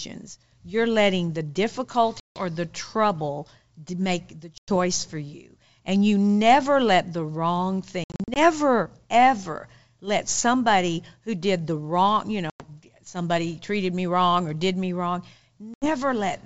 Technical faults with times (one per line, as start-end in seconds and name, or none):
2.20-2.45 packet loss on an ADPCM call
4.58-4.70 packet loss on an ADPCM call
8.04-8.39 packet loss on an ADPCM call
12.50-12.64 packet loss on an ADPCM call
15.74-15.90 packet loss on an ADPCM call